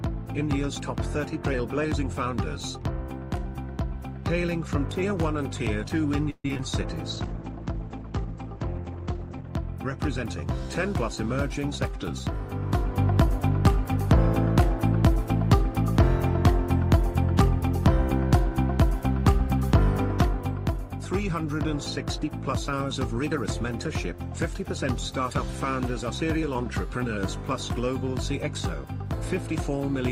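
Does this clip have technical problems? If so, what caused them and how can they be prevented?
Yes. From 6.30 to 6.60 s the sound turns choppy and robotic: repeated packet loss left four gaps, the longest 139 ms, each patched by stretching the previous sound. A steadier network path or forward error correction would prevent this.

From 7.11 to 9.56 s the audio goes rough and muffled. This is a call bitrate drop from 32 to 13 kbps, with the coded bandwidth narrowing from 20 kHz to 8 kHz. More reliable bandwidth, or a higher minimum bitrate, would prevent it.

From 10.93 to 14.17 s the sound runs faster at unchanged pitch, about 104% speed. This is a jitter buffer speed-up, which trimmed around 150 ms of pitch-period slices to cut excess delay. Reducing packet bunching and jitter upstream would prevent it.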